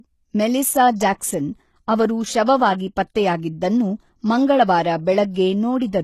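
HE-AAC compression runs throughout, with treble likely rebuilt from copied lower bands, leaving s sounds gritty and lispy in a way that fits a bitrate near 16 kbps.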